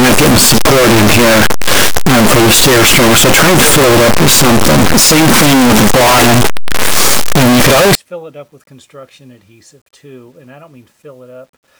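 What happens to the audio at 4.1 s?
At 4.1 s you're inside a stretch of harsh, very loud distortion running from 0 to 7.95 s, likely signed and unsigned mixed up on the 8-bit samples, so every zero crossing slams across full range.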